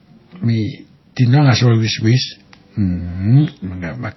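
Speech runs through the whole clip with nothing above about 5.8 kHz and two different kinds of coding damage layered together. The swirly, watery smear fits a low-bitrate MP3 around 24 kbit/s, and the metallic, synthetic top fits HE-AAC around 48 kbit/s. This is likely transcoding between lossy codecs. A single codec would leave only one artefact character, but here the later coder spent its bits re-encoding the earlier damage, and the lowest ceiling in the chain, about 5.8 kHz, stayed.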